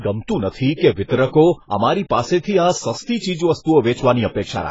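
From start to end, the speech has the signature of AAC compression, most likely AAC-LC squeezed to a very low bitrate, around 16 kbps. With so few bits, the encoder discards everything above about 7.6 kHz and coarsely quantises what remains, leaving gaps in the spectrum. The damage is heavy: the voice sounds dull and smeared, sibilants turn fizzy, and sustained sounds take on a watery, warbling texture throughout.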